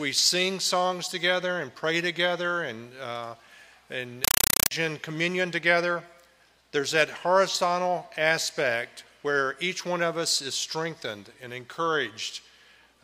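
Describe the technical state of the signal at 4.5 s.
4.24–4.71 s: compressed stream played as audio. Undecoded AC-3 taken as samples gives 5.33 ms noise bursts 31.25 times per second, heard as chattering static.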